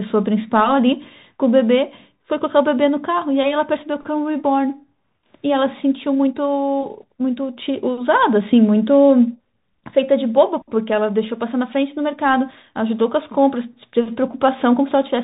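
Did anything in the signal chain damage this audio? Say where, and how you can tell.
Yes, at the codec stage: a Bluetooth CVSD headset codec runs throughout the speech. Nothing passes above 4 kHz, s sounds turn scratchy, and a granular hiss sits underneath. A plain narrowband filter would sound dull but clean; here, one-bit delta steps, which fit a 64 kbit/s stream, cannot track loud high sounds.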